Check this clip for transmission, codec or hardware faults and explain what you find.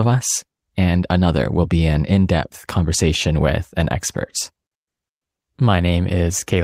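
No faults detected in this recording.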